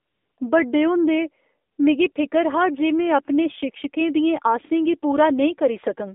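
AMR narrowband mobile codec, throughout the speech: everything sits in a narrow band from about 250 Hz to 3.6 kHz, with nothing above that, because the audio was carried at an 8 kHz sampling rate. The codec rebuilds the voice from a vocal-tract model driven by a handful of pulses per 5 ms subframe. The damage is plainly audible as a buzzy, synthetic edge, which fits a low mode around 7.4 kbps.

AMR comfort noise, first from 0.00 to 0.38 s, just before "बड्डे होंदे": the phone judged the line silent and sent no speech frames, so the receiver filled the gap with smooth synthetic noise built from a rough level and spectrum. It returns briefly from 1.72 to 1.78 s, between "बड्डे होंदे" and "मिगी फिकर हा जे", and from 2.12 to 2.16 s, just before "फिकर हा जे में". Each time a steady hiss switches in and out.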